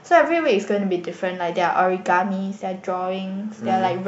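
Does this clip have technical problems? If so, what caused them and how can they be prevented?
Yes. Running right through the speech there's a steady ticking at 20 Hz, a rough buzz that rides on the signal and drops away in the gaps. That's the resampler restarted on every block: the 48 kHz to 44.1 kHz conversion was done on 50 ms chunks in isolation, so at each edge the filter saw silence or the wrong end of the chunk instead of the real neighbouring samples, leaving a small error every 50 ms. To prevent it, use a streaming resampler that carries its filter state across blocks, or resample the whole file in one pass.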